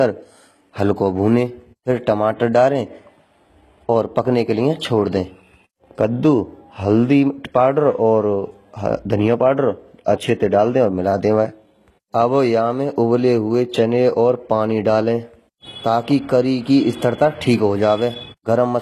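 Plainly audible codec damage runs through the whole speech. Nothing sounds above 12.3 kHz. The treble is rebuilt from copied lower bands, so harmonics don't align and s sounds turn gritty and lispy. This is likely HE-AAC compression, fitting a bitrate near 16 kbps.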